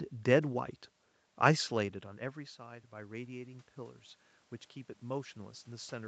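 From 2.18 to 4.07 s the voice and room noise swell together by about 4 dB: automatic gain rising, after the talker moved away around 1.5 s and the input fell about 16 dB.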